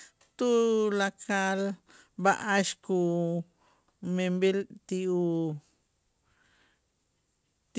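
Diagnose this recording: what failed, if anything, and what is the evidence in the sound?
Nothing failed: the speech arrives via a call path with nothing above 8 kHz, which fits G.722 wideband coding at 64 kbps, and no stage from capture to playback shows a fault.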